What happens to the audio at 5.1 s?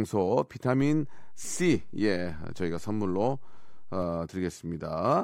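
Nothing goes wrong at 5.1 s; the speech continues intact there, with no dropout, click or distortion.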